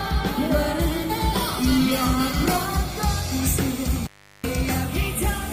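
From 1.42 s to 3.43 s the sound turns rough and coarsely textured, at its worst for about 1.19 s before clearing. This is a call bitrate drop: the bandwidth estimate fell and the encoder went from 32 kbps to 16 kbps, coding the audio more crudely.

Between 3.95 s and 4.54 s the sound cuts out for roughly 0.37 s, with crackle at both edges and faint hiss in the gap. That is an intermittent contact, a loose cable or plug briefly opening the signal path.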